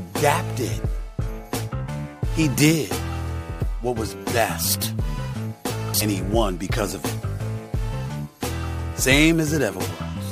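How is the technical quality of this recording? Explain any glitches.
No glitches or technical faults are audible anywhere in the recording.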